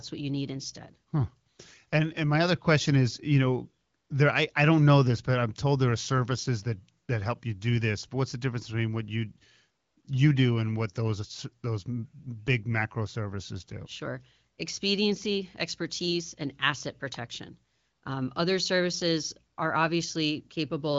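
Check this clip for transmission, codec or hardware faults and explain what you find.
One fault is audible: an electrical switching spike at 17.14 s, just after "expediency expertise and asset". It is a sharp snap about 4 ms long, laid on top of the speech and most likely picked up from a nearby switch or discharge arcing into the line. Unlike a dropout click, nothing underneath is missing or cut. The speech band ends near 7.3 kHz, which points to AMR wideband (HD Voice) coding at a higher rate around 15.85 kbit/s, and it sounds clear.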